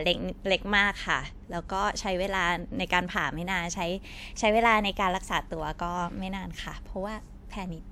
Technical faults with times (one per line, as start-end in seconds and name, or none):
0.00-7.92 transcoding between lossy codecs